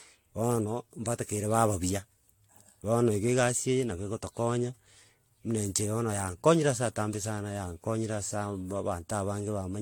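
Speech throughout sounds swirly, hollow and smeared, with consonant attacks blurred and nothing above 19.2 kHz. This is generation loss, likely from about seven successive lossy encodes, each requantising on a shifted frame grid, with a character that fits AAC-LC near 96 kbit/s.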